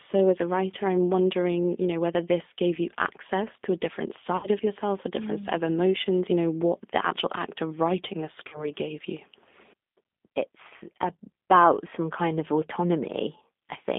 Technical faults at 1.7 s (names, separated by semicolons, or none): G.729 codec